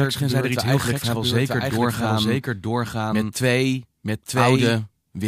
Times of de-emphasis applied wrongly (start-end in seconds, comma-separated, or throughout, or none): none